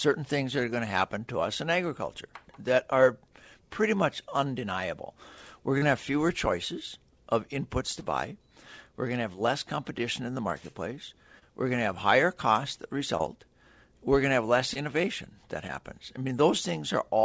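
Brief smears and wobbles break into the sound at 5.78, 8.00, 9.33, 11.39, 13.17, 14.73 and 15.67 s. The one at 5.78 s is the longest. This is short concealed packet loss: the receiver bridged each gap of about 20 ms (40 ms at 5.78 s) by extending the preceding sound before blending back. The call path itself is audible as its usual coding noise and a top end that stops at 8 kHz, which fits a wideband G.722 link at 64 kbps.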